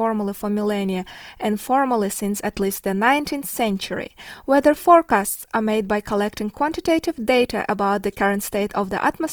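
Speech that sounds grainy and rough for the whole clip, with a noisy texture in place of clean tone, while the band stays wide up to about 20.2 kHz. The likely cause is Opus compression in its CELT music mode, filling starved bands with noise, which fits a rate near 24 kbps.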